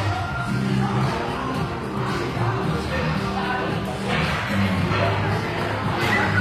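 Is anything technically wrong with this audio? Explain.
Yes. Throughout, the sound has a gritty, metallic treble with nothing above 14.9 kHz, likely from HE-AAC compression at about 24 kbps. Spectral band replication copies lower bands upward, so high harmonics misalign.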